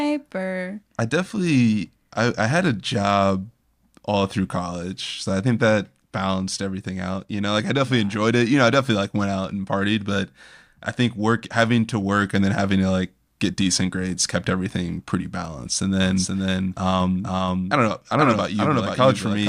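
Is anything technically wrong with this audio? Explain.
Yes. From 16.00 s to the end, a doubled audio track appears: a dry copy trails about half a second behind, somewhat quieter, likely from a second slower capture path.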